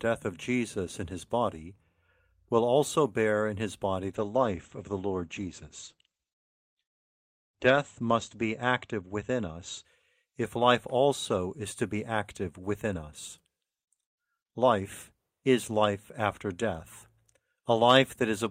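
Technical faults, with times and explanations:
4.19–9.91 s, call bitrate drop: the encoder's bit budget fell to what sounds like about 13 kbps, so coding coarsened and bandwidth shrank to 8 kHz, leaving speech muffled and rough.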